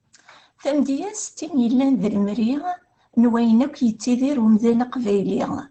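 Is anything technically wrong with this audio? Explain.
Yes. Opus voice compression runs through the whole speech clip. The speech-oriented SILK coder has narrowed the band, leaving nothing above 8.7 kHz, and coarse excitation coding makes the voice audibly muffled, slightly hoarse and robotic, which fits a bitrate around 12 kbps.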